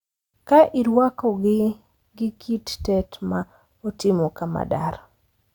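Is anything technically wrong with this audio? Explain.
No, nothing technically wrong stood out on listening to this speech recording.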